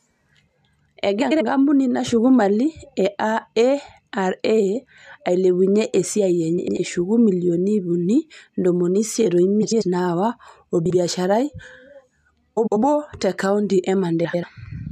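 Speech, with six short garbled flutters at 1.22–1.42 s, 6.58–6.77 s, 9.62–9.82 s (right after "o ntomomi isiet o"), 10.86–10.95 s, 12.56–12.77 s (just before "te kaonti") and 14.24–14.44 s (after "te kaonti"). These are frames out of order: two adjacent runs of about 93 ms each (about 46 ms at 10.86 s) play with their halves exchanged. Unlike a dropout or repeated frames, no time goes missing and nothing plays twice.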